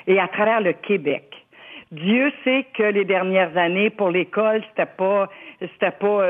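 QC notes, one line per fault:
0.43 s, compressed frames skipped: the audio jumps ahead by roughly 50 ms, consistent with two lost frames of about 26 ms each. Overlapping neighbours smear the join into a soft blip, not a click. The spectrogram shows a narrow, slightly blurred vertical seam where the texture abruptly changes.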